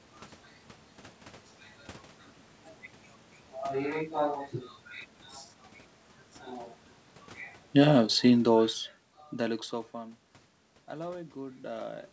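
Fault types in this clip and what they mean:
Automatic gain falling: the call's automatic gain control judged the input too loud or its background noise too strong and lowered its gain gradually, so from 7.64 s to 9.67 s the whole signal sinks by about 8 dB. Unlike a talker moving away from the microphone, the room noise drops together with the speech. The talker's own shift near the end of the fall, around 9.5 s, changes only the speech level and leaves the background where it was.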